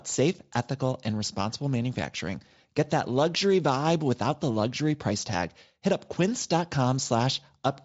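Nothing in this speech recording stood out as a technical problem on listening.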